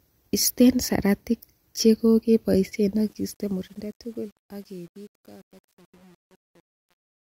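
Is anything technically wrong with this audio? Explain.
Yes, there are two faults.

From 2.95 s to the end, the fade-out that begins around 3 s shows truncation distortion on a fade. The gain stage keeps only 8 bits and adds no dither, so as the level drops, the waveform collapses onto a few coarse quantisation steps. Rather than tapering cleanly, the speech turns gritty and granular, and it is at its worst from about 3.58 s onward.

Between 3.46 s and 4.44 s there is a sudden detuning: the speech runs 5.28% fast and rises 89 cents, close to a semitone, then snaps back to normal. Speed and pitch move together and return abruptly, which points to a drift correction step, most likely clock-matching software that changed the playback rate in a single jump to rebalance its buffer and then reverted it.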